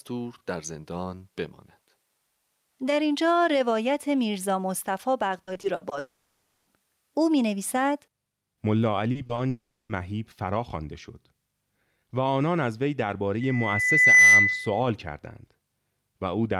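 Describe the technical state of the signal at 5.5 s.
At 5.5 s you're inside a burst of repeated packet loss (robotic sound), running from about 5.43 to 5.93 s. Six short gaps, the longest 60 ms, get patched by stretching the previous sound, about 180 ms in all, so the speech turns choppy with pieces missing.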